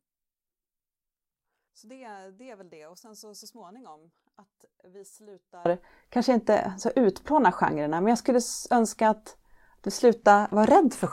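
From the start until 5.66 s, the speech is almost gone, roughly 30 dB down, leaving only a faint residue. The likely cause is one channel inverted: with one stereo side's polarity reversed, the centred voice cancels when the channels are summed to mono. On the waveform this stretch looks nearly flat. A spectrogram shows only a weak trace. Full-level speech returns at 5.66 s with "kanske inte så utplåna".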